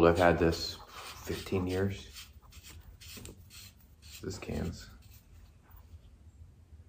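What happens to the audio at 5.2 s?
Compressed frames were skipped between 5.18 and 5.22 s, likely around 20 frames of about 46 ms each, so the audio jumps ahead roughly 0.7 s.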